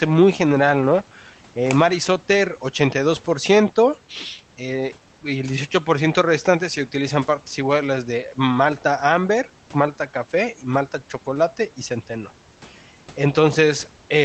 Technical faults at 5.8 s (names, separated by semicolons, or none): none